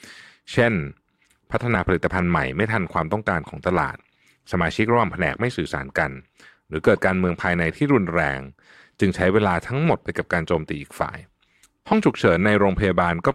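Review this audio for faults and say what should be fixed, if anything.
Damaged data in a compressed stream breaks up the speech three times, at 1.74 s, 3.97 s and 11.91 s. At each point some of the compressed bytes are wrong, so the decoder cannot read the affected frame correctly, loses its place in the stream and has to search for the next valid frame header. Each event lasts under 20 ms and is heard as a short chirp or blip. Storing and sending the file over an error-checked path, and verifying its checksum before decoding, would prevent this.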